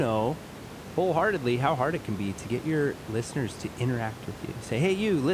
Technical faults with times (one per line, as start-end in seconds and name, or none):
none